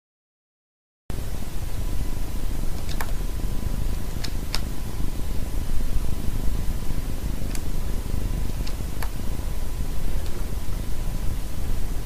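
The first 1.10 s are digital silence, and the sound then starts abruptly at 1.10 s, already under way: a cut-off start, where capture began late and the opening was lost. Unlike a slow fade-in or natural onset, there is no attack at all.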